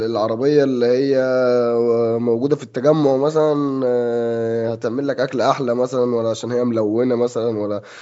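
No faults can be heard in the speech: it carries the ordinary sound of call microphone processing, with the lowest bass trimmed by its high-pass filter, which is normal for that path.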